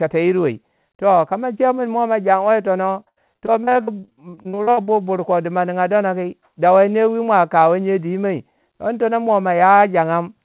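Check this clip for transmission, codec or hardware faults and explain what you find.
One transmission fault stands out: repeated packet loss producing robotic sound between 3.0 and 4.89 s. Throughout the clip the speech stops at 4 kHz, which fits a narrowband G.711 call codec.

Over those 1.9 s, about twenty separate holes open in the stream, the longest about 77 ms. Each hole is filled by extending the sound just before it, and roughly a third of the stretch ends up patched this way. Because the patches repeat the preceding sound instead of carrying new content, the speech turns choppy and robotic, with pieces dropped out. A single late burst or buffer underrun would leave one gap or click. Here many short, closely spaced patches give a buzzy, synthetic texture.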